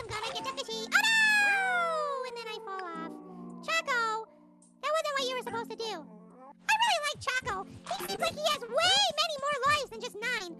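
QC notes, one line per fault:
6.75–10.42 s, scattered short gaps: about ten brief holes spread across this stretch, none longer than roughly 20 ms, together about 200 ms of missing audio. The receiver covered each by extending the preceding sound, reworking about 680 ms around them, so the result is isolated ticks, small smears and hiccups, not silence. Unlike one long dropout, the sound never stops; unlike clipping clicks, the blips follow packet timing, not loud peaks. The call codec path beneath, with its top end near 12 kHz, is steady.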